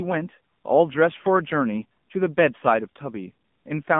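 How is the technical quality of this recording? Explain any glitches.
Technical quality is limited by AMR narrowband mobile codec damage throughout. Speech is confined to about 150 Hz to 3.5 kHz and sounds plainly buzzy and synthetic, which fits a low 7.4 kbps mode.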